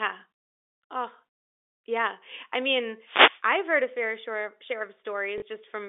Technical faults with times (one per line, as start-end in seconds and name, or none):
3.03-3.43 wireless microphone noise hit
5.38-5.42 packet loss with last packet repeated